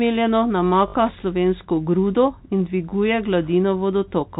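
From 0.88 to 0.94 s, before "slovensko grudo in dviguje", packet loss with the last packet repeated fills 60 ms by looping one segment, which fits three lost 20 ms packets. It sounds like a brief robotic stutter. The waveform shows identical repeated chunks.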